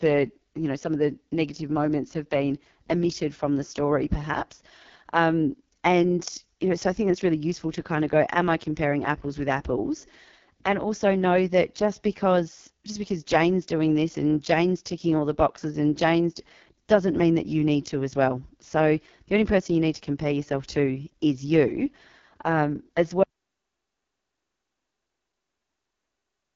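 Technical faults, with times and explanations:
Throughout: AMR wideband (HD Voice) codec at 6.6 kbit/s, the lowest rate, heavily damaged; speech sounds rough and raspy, with nothing above 7.2 kHz.
23.23 s to end: audio dropout to silence; the sound cuts out mid-flow into silence with no room tone, likely from input lost while recording continued.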